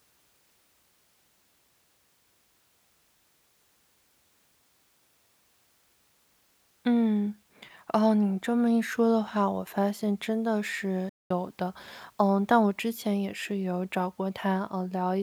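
At 11.09 s the speech cuts out abruptly in mid-flow and the output sits in silence for about 0.21 s, until 11.31 s, before the talking picks up again. That gap is a playback stall. The player most likely ran dry of buffered data, or its playback thread was briefly blocked, so nothing reached the output until it recovered and resumed feeding samples, leaving a silent hole.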